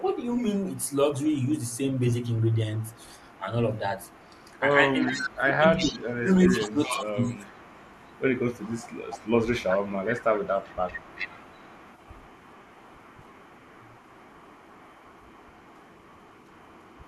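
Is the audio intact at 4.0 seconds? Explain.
No. From 3.74 to 5.36 s an echo leak is audible: a copy of the speech returns 390 ms late, roughly 10 dB below it. It is likely the far end's echo canceller failing to remove its loudspeaker's sound from its microphone.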